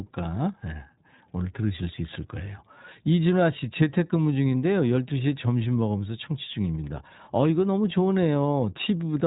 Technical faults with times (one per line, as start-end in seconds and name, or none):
0.00-9.27 iLBC codec